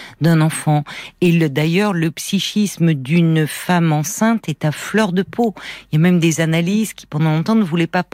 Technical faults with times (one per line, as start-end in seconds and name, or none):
none